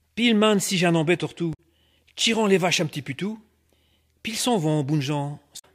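A short audio clip carries two bursts of damaged data in a compressed stream, at 1.50 to 1.60 s and again at 5.55 to 5.65 s, each lasting roughly 90 ms. Each is heard as a brief glitch cutting across the sound. Bytes in the encoded stream at those points were corrupted, so the decoder misread the affected frames, lost sync, and had to hunt for the next valid frame header before clean playback resumed.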